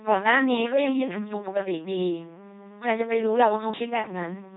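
Speech runs through an LPC-10 vocoder for the whole clip, giving a buzzing, mechanical robot voice. Each moment is rebuilt either from a pulse train or from noise through a short vocal-tract filter, so voicing errors cause stray buzz or hiss. The damage is heavy, consistent with a 2.4 kbit/s coding. On a spectrogram, harmonics look rigidly regular, unvoiced stretches turn to flat noise, and nothing appears above 3.8 kHz.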